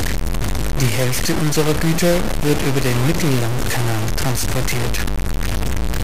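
From start to finish the speech is coated in a harsh, grainy distortion that rises and falls with the voice, with quiet stretches sputtering or dropping out. This is likely low bit depth without dither: truncation to about 3 bits leaves error roughly as loud as the speech itself.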